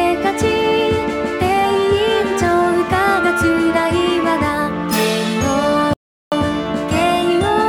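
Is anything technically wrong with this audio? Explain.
Yes. From 5.93 s to 6.32 s there is an audio dropout to silence lasting about 0.38 s. The signal stops abruptly in mid-flow and resumes just as abruptly, and the gap between is silence with no background or room tone underneath. That points to the input being lost while recording continued, most likely a momentary disconnection, link failure or mute, with silence written in its place. Whatever sounded during that stretch is not recoverable.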